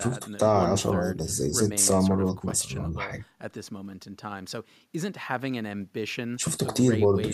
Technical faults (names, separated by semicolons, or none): none